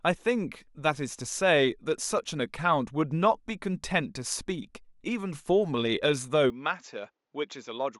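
At 6.5 s the speech turns duller and drops roughly 5 dB in level, with no gap. Nothing above 7.6 kHz remains to the end, and faint new background noise appears, roughly 50 dB down. This is likely an input switched to a poorer device.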